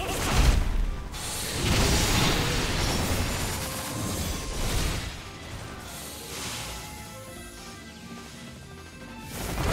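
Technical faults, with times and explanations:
Throughout, channel delay (doubling): one channel trails by about 85.3 ms, which fits a 4096-sample buffer, so the mono sum repeats everything as an equal-level slap echo.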